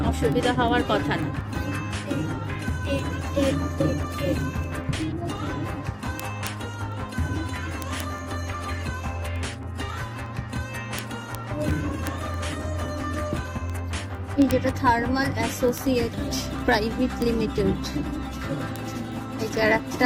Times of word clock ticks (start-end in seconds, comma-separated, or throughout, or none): 0.14-20.02